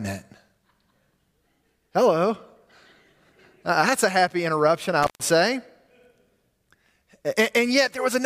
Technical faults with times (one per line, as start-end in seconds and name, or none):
5.03-5.20 intermittent contact